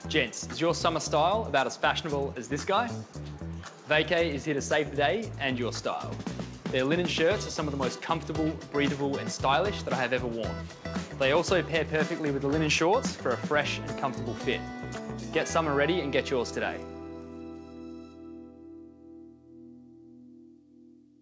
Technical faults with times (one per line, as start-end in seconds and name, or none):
none